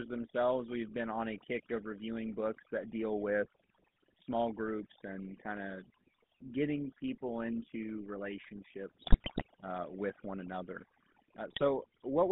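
From the first second to the end, overdone noise removal is at work. A noise reducer set far too hard shuts off frequency bands it mistakes for noise. The background drops and breaks up into twinkling specks. Quiet parts of the speech vanish too.

The whole clip also carries the GSM full-rate codec. It rebuilds the voice from a vocal-tract model driven by sparse, evenly spaced pulses. That gives the plainly audible buzzy, gravelly roughness. The line band runs from 200 Hz to 3.5 kHz, which fits a 13 kbps GSM stream.

At 9.02 to 9.47 s, GSM bit errors break in, just before "uh with one another". Corrupted filter, pitch and gain values reach the decoder. The spectrum bends and the level jumps, so the speech squawks, pops and gargles. The burst points to an error rate of about four percent.

At 11.50 to 11.63 s, a second, shorter burst of GSM bit errors occurs. The same corruption distorts the decoded speech. 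It is heard as a brief gargling squawk.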